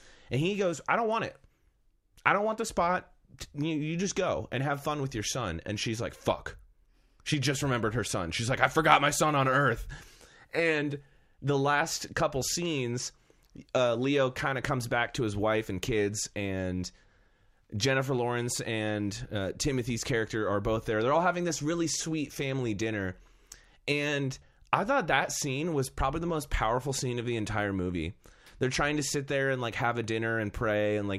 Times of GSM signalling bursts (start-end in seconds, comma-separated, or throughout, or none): none